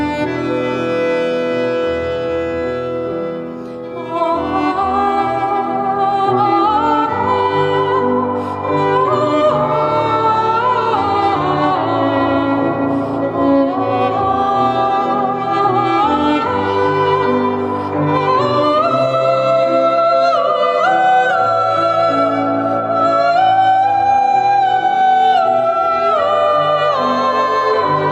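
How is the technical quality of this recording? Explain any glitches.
No glitches turn up anywhere in the recording; there is nothing to explain.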